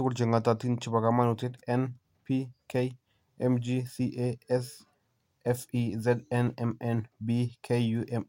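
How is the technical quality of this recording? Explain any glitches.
Nothing in the recording stood out as a technical problem when listening to it.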